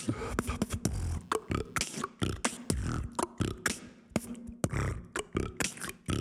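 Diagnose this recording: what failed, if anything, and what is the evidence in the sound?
The analogue wiring failed: the audio circuit shares a ground with the computer, so changing load from the processor, graphics card or mouse shifts that reference and feeds directly into the signal path. The result is computer activity noise from 1.14 to 3.14 s, a buzzy, chirping texture pulsing at roughly 150 Hz and sitting roughly 40 dB below the signal. It starts and stops with the machine's workload, not with the sound being recorded.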